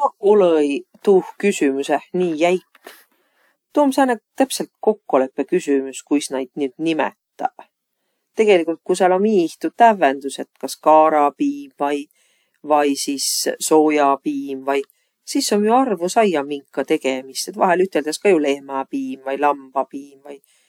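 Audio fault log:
Nothing to log here: this speech recording comes through without a single fault anywhere in it.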